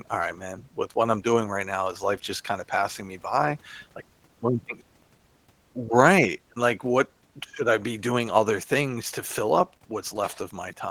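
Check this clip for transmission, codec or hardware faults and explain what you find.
One codec fault runs through the whole speech clip: Opus voice compression. The speech below 8 kHz is carried by a linear-prediction coder with only a thin coarse layer above it, so the voice sounds somewhat hoarse and slightly robotic, and the damage is plainly audible. The level of damage fits a rate around 16 kbps in hybrid mode. Content reaches about 20.4 kHz, so this is not a simple low-pass dulling, and the rough, buzzy excitation differs from the watery swirl of an MP3-style coder.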